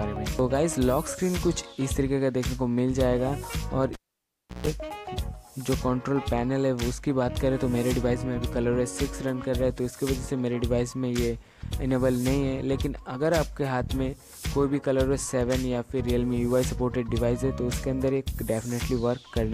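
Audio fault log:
3.93–4.67 s, cable pulled and plugged in: a pop opens a gap of about 690 ms of near silence, then roughly 140 ms of 60 Hz mains buzz as the plug's tip alone makes contact, and a second pop as sound returns. The buzz before reconnection separates this from a plain dropout.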